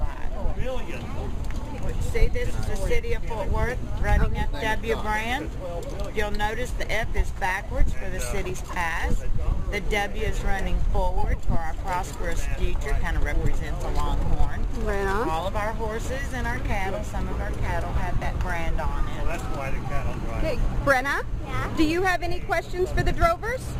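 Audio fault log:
18.13–18.25 s, lost LE Audio frames: brief grainy, noisy smearing in short patches. About 68 ms is missing across 120 ms, with the longest gap around 20 ms. The LC3 decoder fills each gap by repeating the last spectrum with randomised signs.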